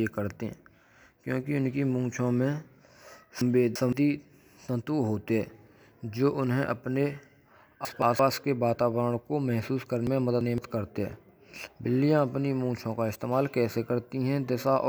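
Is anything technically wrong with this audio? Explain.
Yes. At 3.41 to 3.93 s, 7.85 to 8.19 s and 10.07 to 10.58 s the speech jumbles briefly. These are chunks out of order: a 0.17 s block plays two blocks late (one block late at 7.85 s), leaving hard joins.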